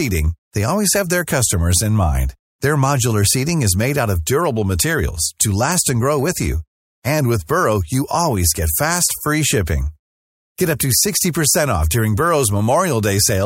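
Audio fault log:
Nothing stood out on a careful listen to this speech recording.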